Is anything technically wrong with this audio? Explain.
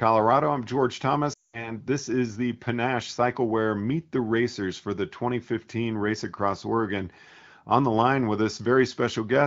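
Yes, there's a glitch in this speech from about 1.33 to 1.71 s, right before "this is the". It sounds like lost AMR speech frames: radio errors wrecked a run of frames, roughly 200 ms' worth, so the decoder kept reusing the last good pitch and vocal-tract settings while ramping the gain down. You hear the sound drop quickly to near silence, then the voice comes back briefly weak or rough. The wideband AMR codec itself adds only light coding grain.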